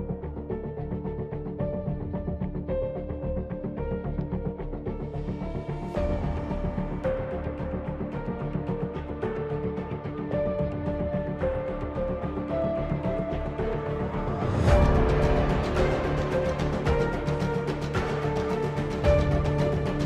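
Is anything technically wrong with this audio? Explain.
No, nothing technically wrong turns up here; the audio sounds fine all the way through.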